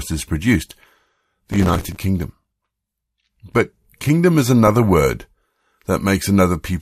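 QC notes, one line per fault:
1.52–2.04 s, processor overload crackle: the processor missed a long run of buffer deadlines, each filled with stale audio, giving gritty tearing whose grain suggests buffers of about 5 ms.
4.67–4.92 s, just after "kingdom is", DAB burbling: weak reception let bit errors slip past error correction, putting wrong samples into single sub-bands, so short blips of noise break into the speech.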